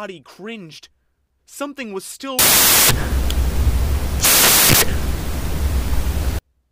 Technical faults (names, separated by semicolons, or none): samples built from the wrong bytes